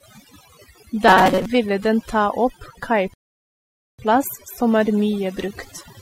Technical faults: overdone noise removal; robotic sound from repeated short buffers; rebuffering stall

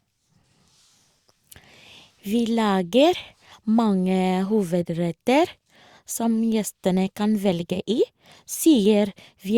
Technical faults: none

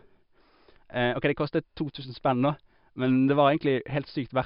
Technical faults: none

